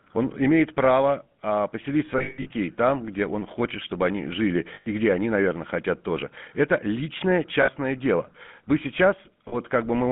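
From start to finish the speech runs through a GSM full-rate codec, squeezed into roughly a 150 Hz to 3.5 kHz band, consistent with the 13 kbps full-rate coder. Modelling the voice as pulses through a vocal-tract filter leaves it plainly buzzy and gravelly, with no air on top.

Then there are the lost GSM frames, where the decoder just re-uses the last good frame at a dropping level, so you get a rough metallic ring instead of a clean gap. The worst is 2.18 to 2.51 s, between "имеет право а поселить" and "там где он хочет": about 240 ms of loss scattered over 320 ms, the longest run around 150 ms. Shorter ones hit at 4.74 to 4.87 s (120 ms, between "хочет чтобы они жили" and "где они наверное хотят"), 7.62 to 7.69 s (60 ms) and 9.48 to 9.56 s (40 ms).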